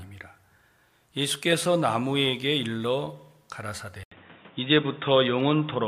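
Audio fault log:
4.03–5.88 s: input switched to a poorer device, likely. After an 80 ms silence the sound turns dull and boxy with nothing above 3.8 kHz, shifts level by roughly 5 dB, and carries new background noise.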